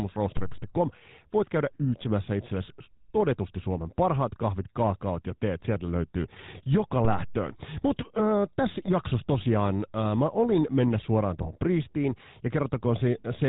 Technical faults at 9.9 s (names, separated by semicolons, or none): GSM full-rate codec